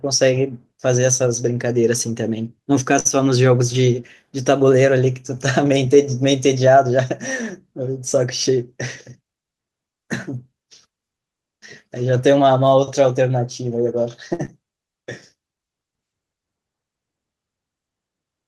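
At 2.99–3.07 s and again at 14.33–14.41 s there is a short stall from a late packet. Each time the jitter buffer ran dry and the receiver held the last sound for about 57–58 ms until the packet arrived. Nothing is lost, but the speech briefly drags, and playback then runs that much later.

Just after, at 14.45–14.50 s, comes a short concealed packet loss. About 40 ms of audio never arrived, and roughly 29 ms of synthesized continuation covers the gap before blending back, giving a brief smear or wobble.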